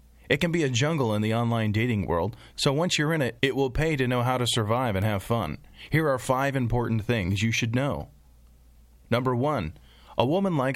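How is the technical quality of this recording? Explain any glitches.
There is one glitch: a single sharp tick in the speech at 5.02 s, just after "know how to survive" and just before "have fun". This is a bit error spike. It's a dry, instantaneous click with no pitch, spread evenly across the spectrum and unrelated to the voice around it, peaking at about -18 dBFS. Its brevity fits one corrupted sample: a single flipped bit in memory or on a digital link threw that value off by a power of two before the waveform snapped straight back.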